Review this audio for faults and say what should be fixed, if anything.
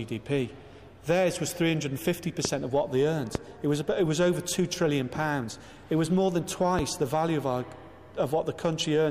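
A loud pop occurs three times, at 2.45–2.48 s, 3.35–3.38 s and 6.79–6.82 s, each about 15 dB above the surrounding sound, which continues underneath. The likely cause is a voltage step from a plug, switch, static or driver glitch. On a waveform each shows as a tall, brief spike; on a spectrogram, a thin vertical broadband stripe. To prevent it, secure connectors, ground equipment and avoid switching or handling gear while recording.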